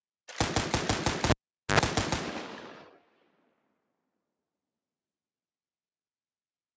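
A noise suppressor applied to music or sounds runs across the whole clip. Tuned for speech, it reads sustained tones, room ambience and reverb as noise and pulls them down, while sharp onsets slip through. Held material and decaying tails therefore sink and recover in swings of around 20 dB, giving a pumping, fluttering, thinned-out character. Through the call microphone processing the top end stops at 8 kHz, as expected.

A cable pulled and plugged in disrupts the signal from 1.30 to 1.79 s. A live lead is yanked out and pushed back: a pop marks the disconnection, then the sound falls to near silence for about 0.44 s. As only the connector tip touches on reinsertion, a 76 ms burst of 50 Hz mains buzz breaks through, and a second pop comes as the full signal returns.

Sound cut by the noise suppressor hits hardest from 2.86 to 4.0 s. Here the suppressor judged the sound itself to be noise and attenuated it more than the rest of the clip, reaching a deepest drop of about 19 dB over roughly a second. 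Steady and fading elements lose the most, sinking in level and having their decays clipped short, while abrupt transients largely survive intact.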